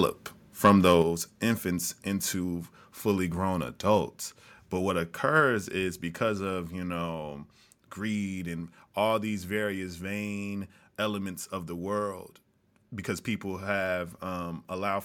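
From 0.64 to 0.93 s the loudest speech peaks are flattened and take on a harsh, crackling edge. This is microphone overload. The input was likely set too high, pushing peaks about 4 dB past the converter's limit. Only a small share of samples gets clipped.

At 1.02 s the whole level drops suddenly, voice and background together, by about 5 dB. Smaller drops follow at 4.08 s, about 1 dB, and at 5.4 s, about 2 dB. This is microphone volume stepped down, likely the call software lowering the input after detecting the overload.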